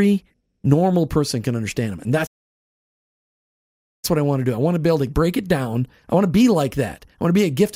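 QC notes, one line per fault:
2.26–4.05 s, playback stall: speech cuts to silence for about 1.8 s, then resumes at "what I want to", likely because the player ran out of buffered data.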